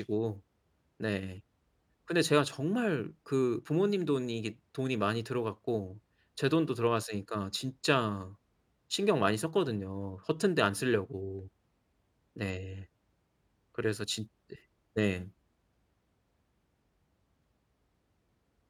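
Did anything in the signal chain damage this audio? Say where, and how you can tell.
No, no signal-chain damage heard.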